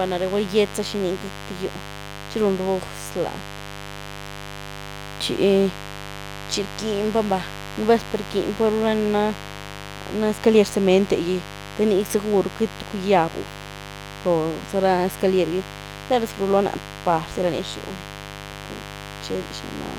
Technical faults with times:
0.00-19.98 mains buzz

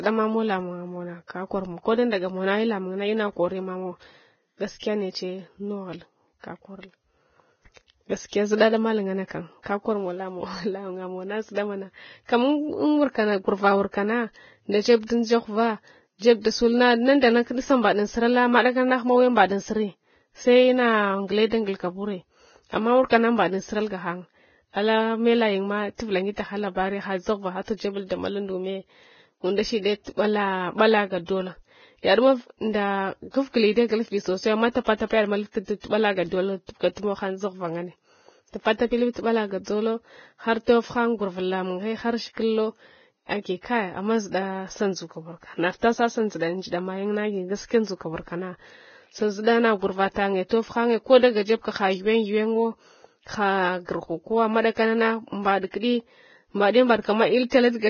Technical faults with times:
0.00-57.89 Vorbis compression
17.20-17.23 pre-echo
51.18-51.23 pre-echo
54.61-54.64 pre-echo

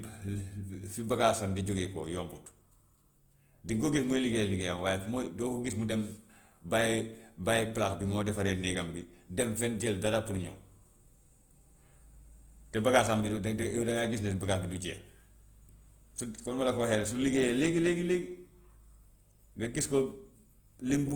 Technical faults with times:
0.00-21.15 Opus compression

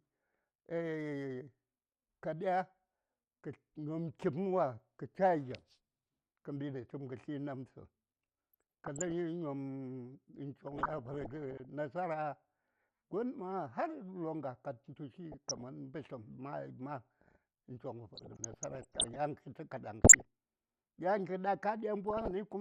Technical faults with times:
0.00-22.60 MP2 compression
8.53-9.12 DAB burbling
10.67-11.65 DAB burbling
15.32-15.61 DAB burbling
18.15-19.16 DAB burbling
20.04-20.22 DAB burbling
22.05-22.31 DAB burbling

